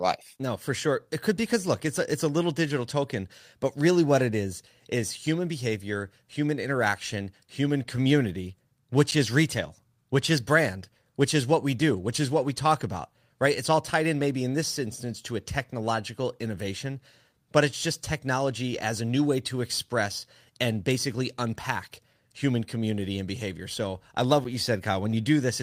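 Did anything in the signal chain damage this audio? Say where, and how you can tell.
Yes, two short blocks of digital silence, at 9.11 s (about 10 ms) and 24.44 s (about 6.5 ms). Both are under 15 ms, so you hear a tick or dip in the speech. The audio stops and restarts with no fade, which is what makes it tick. That points at the driver or buffer stage, where the output buffer wasn't filled in time, or a calculation produced invalid numbers that came out as zeros.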